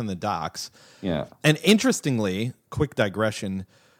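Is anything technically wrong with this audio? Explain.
No, nothing technically wrong can be heard in this speech recording. No fault turns up anywhere in the audio.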